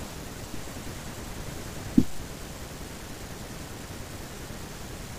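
At 2.15 to 2.20 s the FM radio link fades as reflections cancel, a wireless microphone noise hit: a short swish of receiver static over the speech.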